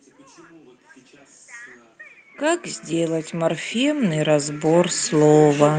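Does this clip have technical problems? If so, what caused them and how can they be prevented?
Yes. Automatic gain rising starts at 2.34 s and continues to the end of the clip. The gain control judged the input too quiet and began raising its gain step by step. Speech and background noise therefore swell together over roughly three seconds, so the background noise climbs along with the speech. The call path's Opus coding at 32 kbps adds its usual coding noise, with content above 12 kHz cut off. To prevent the swell, set a healthy input level at the source, or fix the gain and turn automatic gain control off.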